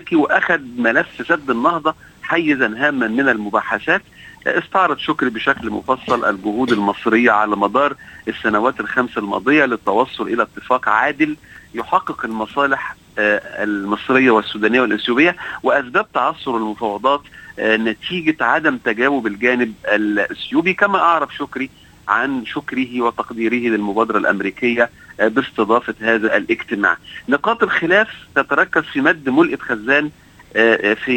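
A brief processor overload crackle tears through the audio from 11.38 to 11.56 s: a handful of very short buffers missed deadlines and replayed stale audio, unlike a single isolated dropout click.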